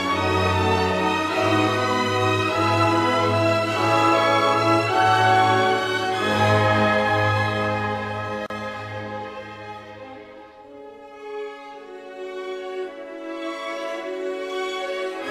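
At 8.46 s, two separately encoded pieces were joined without trimming encoder delay and last-frame padding. The result is a gap at a join of encoded pieces: a 37 ms silence, to 8.50 s, with smeared edges, before the sound resumes where it stopped.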